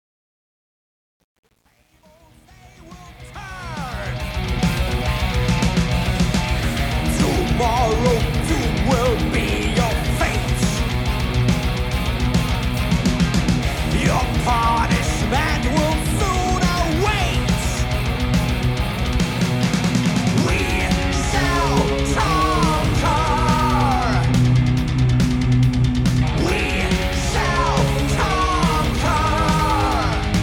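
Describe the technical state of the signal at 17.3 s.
At 17.3 s the signal is intact, with no audible fault at that point.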